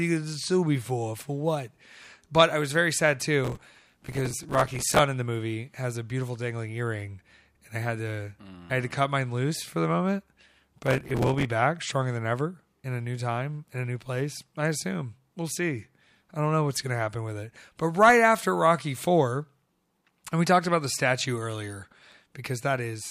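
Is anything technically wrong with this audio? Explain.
Yes. Processor overload crackle occurs from 3.45 to 4.99 s and from 10.86 to 11.45 s. The processor repeatedly misses deadlines for buffers of around 5 ms and replays stale audio with hard edges, producing a gritty, tearing crackle over the speech.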